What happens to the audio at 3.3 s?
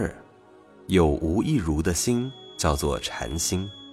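At 3.3 s you're in the middle of a feedback whistle that starts at 2.0 s and runs right to the end of the clip. It's a thin, steady tone at about 3.4 kHz, sitting roughly 25 dB under the main sound and swelling and fading slowly in level. The likely cause is the loudspeaker-to-microphone loop hovering right at the edge of feedback, so that one frequency keeps ringing without ever running away.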